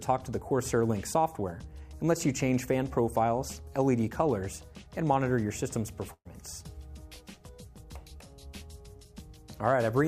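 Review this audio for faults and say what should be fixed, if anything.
At 6.13 to 6.27 s the sound is briefly held, fading as it goes and dropping to near silence for about the last 60 ms, then picks up further on. This is a burst of packet loss: roughly 120 ms of audio never arrived, and the receiver stretched the last sound to cover about 117 ms. A larger jitter buffer or forward error correction on the link would help prevent this.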